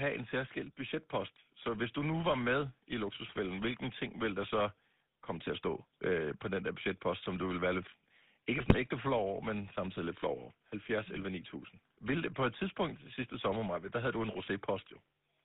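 Throughout, the GSM full-rate codec gives a buzzy, gravelly roughness within a 150 Hz to 3.7 kHz band; unlike plain band-limiting, the grit comes from coarse pulse excitation, fitting a 13 kbit/s coder. At 8.58 to 8.75 s and 11.16 to 11.20 s, GSM bit errors corrupt decoder parameters, causing squawks and gargling rather than the silent gaps of dropped frames.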